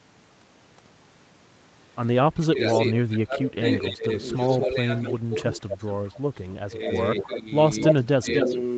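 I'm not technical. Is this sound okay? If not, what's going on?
No, this call recording has two problems, and they overlap.

Speech suppressed in double talk: between 2.33 and 5.63 s, and again between 6.64 and 8.5 s, the speech keeps dipping, sometimes pushed down hard enough to nearly vanish, for about two seconds in total in the first stretch and under a second in the second. This likely comes from the call's echo canceller: when both ends talk at once, it can't tell real speech from echo and turns everything down.

Echo leak: a delayed copy of the speech, trailing it by about a quarter of a second, comes back from the far end. It appears briefly at 2.67 to 2.78 s, then from 3.67 to 6.39 s somewhat quieter than the speech, and from 7.16 to 8.56 s at nearly the same loudness as the speech. The likely cause is a loudspeaker on the other end whose echo canceller failed to remove what its microphone picked up.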